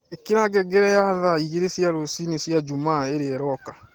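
From start to finish the speech carries Opus voice compression. The codec is running in hybrid mode: linear-prediction SILK handles the band below 8 kHz, and a CELT layer codes the upper band, which still reaches about 20.2 kHz. The damage is plainly audible. The coarse excitation coding leaves the speech hoarse and faintly robotic, which fits a rate of around 16 kbps, spread thin across a fullband signal.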